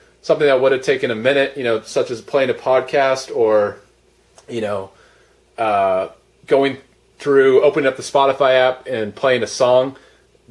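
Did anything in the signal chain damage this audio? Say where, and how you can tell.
No, no stage of the signal chain shows any audible damage to this audio.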